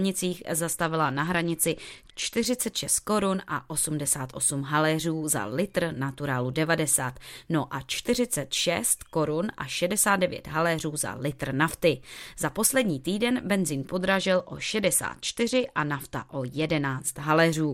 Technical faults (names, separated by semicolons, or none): Bluetooth SBC bit pool drop